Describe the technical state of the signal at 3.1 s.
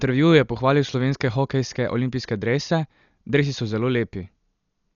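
At 3.1 s, as throughout, the speech carries heavy damage from likely Dolby Digital compression. Nothing above 7 kHz survives, and bit-starved lines filled with dither give dull, fluttering roughness.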